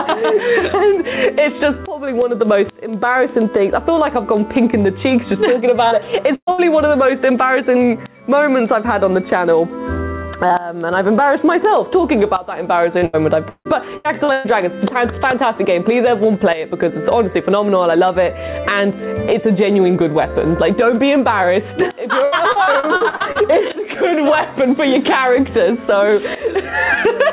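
Gain pumping runs through the whole clip, with the level swinging by about 15 dB. The likely cause is an input gain set far too high, with a fast limiter clamping down on each peak. On the waveform the quiet stretches look raised and noisy while the loud passages are held down. The envelope looks squashed, with little difference between loud and soft.

Word clock ticks start at 0.18 s and continue to the end, arriving at a steady rate of about ten per second. They are sharp, and some are stronger than others. This points to a digital link read by a receiver clock that is not locked to the sender's. The offset is on the order of 200 ppm, so a single sample slips each time the clocks drift past each other. On a spectrogram they show as thin, evenly spaced vertical lines. The lines only reach 4 kHz, because the band above is empty throughout from the G.711 A-law call path.

At 5.88 s there is a short concealed packet loss. 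About 31 ms is filled by extending the preceding sound, and it is heard as a brief smear. On the spectrogram the harmonics or noise texture run on unchanged for a moment instead of evolving.

Two bursts of packet loss follow close together. The first, from 6.35 to 6.50 s, covers about 120 ms: the last sound is held as a fading buzz or hiss, then about 70 ms drops to silence. The second, from 6.51 to 6.61 s, fills about 70 ms the same way. In each case the audio resumes further on, with material skipped. The first burst's waveform shows a decaying tail, then a flat gap, then an abrupt restart.

Repeated packet loss gives a choppy, robotic sound from 12.98 to 14.47 s. There are six gaps there, the longest 158 ms, and roughly a third of the stretch is patched. A second stretch runs from 22.24 to 23.72 s with ten shorter gaps, none longer than 77 ms, covering about a quarter of it. On a spectrogram these stretches look like a frozen, smeared spectrum broken into blocks. 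The waveform is similarly chopped into blocks.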